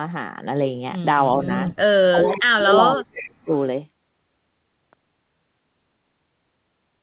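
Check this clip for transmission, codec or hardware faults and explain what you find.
Two faults are present: speech suppressed in double talk, and echo leak. Both appear in the same stretch of the speech. Everything sits below 4 kHz, which points to narrowband call audio such as G.711 A-law at 64 kbps.

Speech suppressed in double talk occurs at 1.36–1.49 s and again at 2.11–3.5 s. The first event is a slight dip of a few decibels. The second removes up to about 35 dB across roughly a second of speech in pieces, so the talker fades and drops out in fragments. The likely cause is an echo canceller that could not tell near-end speech from loudspeaker echo while both sides were active, so it attenuated everything.

Echo leak appears at 2.24–2.4 s, 2.78–3.28 s and 3.54–3.59 s. Each time a copy of the speech returns 366 ms late. It starts around 10 dB below the direct speech, sits at about 15 dB below in the longest stretch, and is only a faint trace near 35 dB down at the end. 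It sounds like a delayed second voice trailing the first. This likely comes from a loudspeaker endpoint whose echo canceller let residual pickup through.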